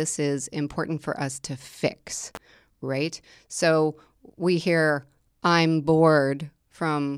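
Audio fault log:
2.35–2.37 s, electrical switching spike: a sharp snap peaking around -15 dBFS sits on top of the speech for about 20 ms. The abrupt transient is likely an arc from a nearby switch, motor or static discharge coupling into the audio line.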